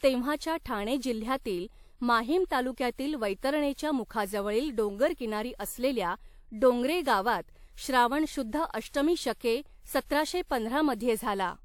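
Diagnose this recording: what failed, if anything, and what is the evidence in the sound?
Swirly, hollow, smeared speech with blurred attacks throughout points to the codec stage: likely generation loss, about three WMA re-encodes near 96 kbit/s, each requantising on a shifted frame grid.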